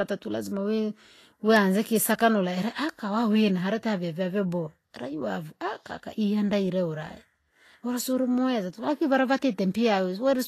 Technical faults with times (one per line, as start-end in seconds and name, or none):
0.00-10.47 Vorbis compression